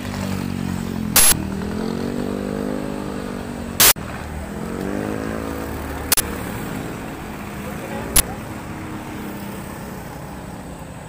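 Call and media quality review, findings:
Uninitialised buffer, 1.16 to 1.32 s and 3.8 to 3.96 s (160 ms each), 6.12 to 6.2 s (80 ms), 8.16 to 8.2 s (40 ms). Short, loud bursts of digital noise replacing the audio. Playback path handed the output stage a block before audio was written, so stale memory contents were played as samples. Block lengths shrink across the clip.

Bluetooth stutter, 1.59 s and 7.26 s. Brief repeat of a slice of about 23 ms, heard as a single-hiccup stutter rather than a sustained buzz. Wireless link dropped or delayed audio, and the receiver replayed its last buffer until fresh data arrived, then resumed further on as if playback had continued. The repeat length fits one lost packet. Probable component: Bluetooth link or receiver jitter buffer.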